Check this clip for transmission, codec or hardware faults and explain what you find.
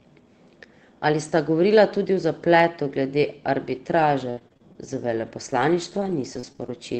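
There is one transmission fault: repeated packet loss, producing a robotic sound. From 3.75 s to 6.76 s, packets kept arriving late or not at all, leaving 13 short holes, the longest 66 ms. The receiver covered each one by stretching the preceding sound, rebuilding about half a second in total. The speech there turns choppy and robotic, with small pieces dropped out.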